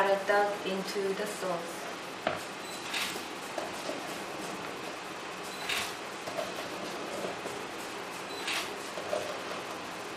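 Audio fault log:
2.78–2.87 s, corrupt frame decoded: for just under a tenth of a second, which fits a handful of consecutive damaged frames, the decoder played flipped bits as if valid, so misread gains or codes dropped energy at wrong frequencies, giving a chirp, squeak, blip, noise burst or brief hole.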